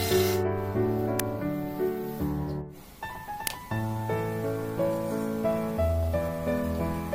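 At 1.20 s a sharp crack cuts through the audio. It lasts about 2.9 ms. The same thing happens again at 3.47 s. Both are the fault known as an uninitialised buffer. A block of output was sent to playback before any audio had been written into it. Whatever stale data sat in that memory was played as samples. The length of each burst fits a 128-sample buffer. Each one is heard as a brief, loud crack.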